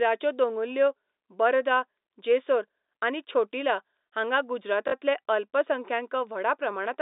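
Packet loss with the last packet repeated hits from 4.88 to 4.92 s, right after "छोटिला हांगां". About 40 ms went missing and the receiver replayed the previous chunk, which fits two 20 ms packets. The repeat comes through as a brief robotic stutter.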